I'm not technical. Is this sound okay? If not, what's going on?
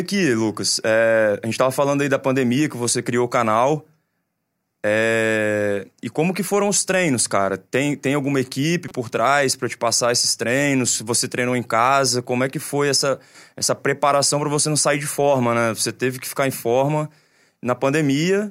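No, there's one glitch. At about 8.88 to 8.92 s, right after "tem alguma equipe" and before "trás para te passar", you'll hear a quick chirp, squeak, blip or burst of noise. That's a corrupt frame decoded: a single damaged chunk of compressed audio got played anyway, briefly scrambling the sound.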